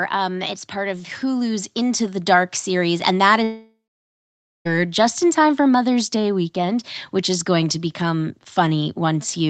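Automatic gain rising from 0.72 to 2.95 s: the gain control judged the input too quiet and lifted it by about 6 dB, so speech and background swell together. A long network dropout, likely, from 3.43 to 4.67 s: the last sound stretches into a fading buzz, then about 0.88 s of silence before speech resumes with material missing.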